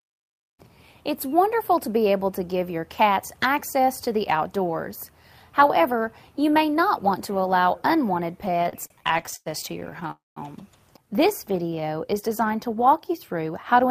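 From 8.41 to 10.11 s the audio drags and stutters through more than twenty brief holds, the longest 99 ms. These are repeated stalls (stutter): late packets kept emptying the jitter buffer.

At 10.11 s the sound stretches, fades, then falls silent for 190 ms before resuming at 10.38 s, likely a call audio freeze from delayed packets draining the buffer.

From 11.21 to 11.82 s the audio runs at 90% speed, gaining 66 ms at unchanged pitch. This jitter buffer slow-down comes from repeated pitch periods rebuilding the reserve.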